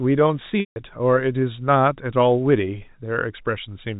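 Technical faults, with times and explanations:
0.60 to 0.76 s, packet loss with pitch repetition: about 160 ms of sound goes missing, which fits roughly 16 lost packets of 10 ms. The receiver loops the last pitch period, heard as a brief buzzy hold fading over about 50 ms into silence before sound resumes through a short cross-fade. On a spectrogram, flat repeated harmonics taper into a blank gap. The waveform shows identical repeating cycles shrinking to zero.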